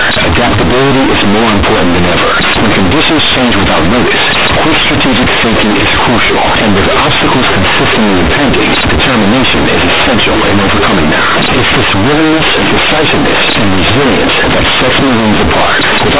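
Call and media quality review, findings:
Companded audio read as linear, whole clip: A-law G.711 bytes played back as plain 8-bit samples, expansion step skipped. Sign changes swing output across half its range, quiet and loud speech equally large. Very loud buzzy distortion, heavy noise filling pauses, telephone band still capped at 4 kHz.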